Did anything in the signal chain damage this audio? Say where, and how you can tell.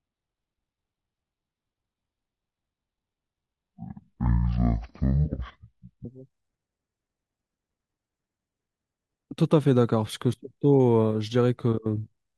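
Yes. From the start to about 6.05 s there's a section at the wrong speed: the speech runs at half speed, dragging and deep, dropped roughly ten semitones. Since pitch and tempo fall together, it's likely a playback or edit stage running on the wrong clock.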